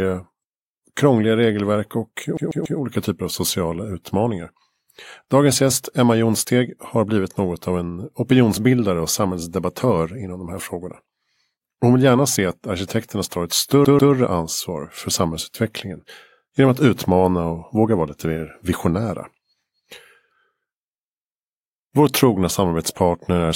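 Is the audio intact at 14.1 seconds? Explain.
No. From 13.85 to 14.13 s, after "att arkitekterna tar ett", a CD stuck on one turn replays a 141 ms fragment twice, with a brief mute at each jump.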